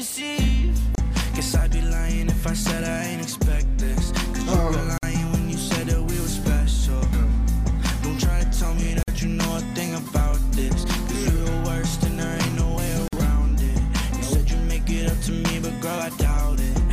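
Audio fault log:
0.95 to 13.13 s: gap at a join of encoded pieces. Silences at 0.95, 4.98, 9.03 and 13.08 s, about 4 s apart, lasting 29 ms then 49 ms. Untrimmed encoder delay and frame padding at each join break the sound before it resumes.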